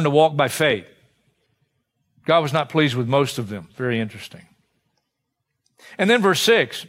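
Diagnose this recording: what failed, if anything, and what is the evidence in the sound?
The converter clocking likely failed: two devices are running on separate, unsynchronised clocks, drifting apart by roughly 400 ppm, so a single sample is dropped or repeated each time the offset reaches a whole sample. The result is clock slip clicks: faint, evenly spaced ticks about every 0.07 s, around a hundred in all, running from 0.13 s to 6.87 s. At that rate they blur into a light rattle over the speech, most noticeable on louder, sustained sounds.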